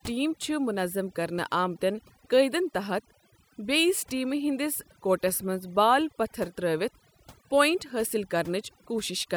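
It's a speech recording with overdone noise removal running the whole way through. The noise reduction was pushed too hard, so any frequency band that sits close to its idea of the background noise gets pulled way down or shut off, and the quieter parts of the voice get caught and removed too. You hear the background drop and break up into little twinkling specks.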